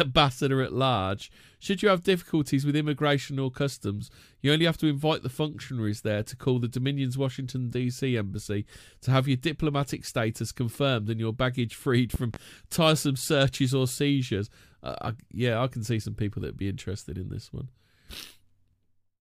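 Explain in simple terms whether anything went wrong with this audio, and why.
A loud pop, in fact two sharp pops in quick succession, sits between 12.14 and 12.38 seconds, right after "and your baggage freed" and just before "tiresome searches or seizures". The speech carries on underneath, but the pops jump well above it. The cause is likely a sudden jolt of electricity entering the signal, such as a plug being touched, a switch flicking or a burst of static, which the equipment then turns into a thump.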